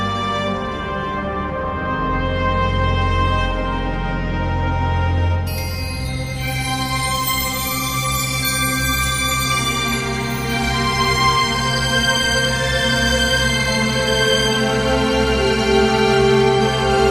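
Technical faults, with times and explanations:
No technical faults can be heard in the audio.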